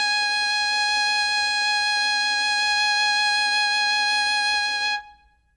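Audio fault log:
Throughout: Dolby Digital compression, likely at a starved rate that fits roughly 64 kbps. The encoder cut the band off at 11.4 kHz and left many frequency lines without mantissa bits, so the music sounds plainly dull, with rough, fluttering noise around tones.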